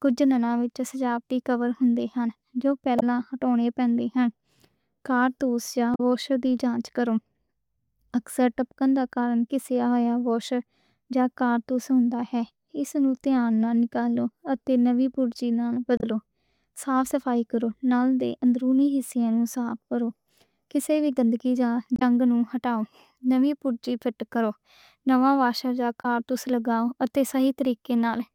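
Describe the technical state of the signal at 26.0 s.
At 26.0 s the speech is hit by damaged data in a compressed stream, lasting from 26.02 to 26.05 s, about 38 ms. Bytes in that part of the encoded stream are corrupted, so the decoder misreads or rejects the affected frames, loses frame sync and has to search for the next valid header before output resumes. The result is heard as a brief chirp, squawk, click or short hole in the speech.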